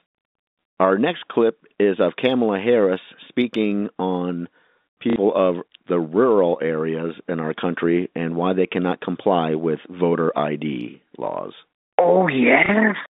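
At 5.10 to 5.16 s and 12.66 to 12.69 s, packet loss with the last packet repeated breaks the speech. Lost audio was filled by replaying the previous chunk. The 60 ms gap buzzes near 33 Hz, which fits 30 ms packets.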